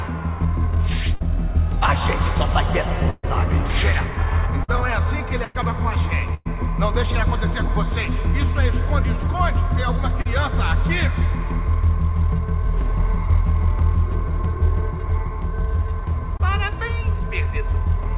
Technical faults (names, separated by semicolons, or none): burst of packet loss; short concealed packet loss